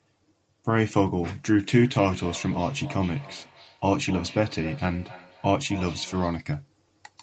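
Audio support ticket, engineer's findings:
Ringing repeats trailing each phrase, 1.66–6.51 s, roughly every third of a second, peaking about 18 dB under the speech. Feedback echo between two devices: second device's speaker re-enters first mic; local echo canceller can't remove it.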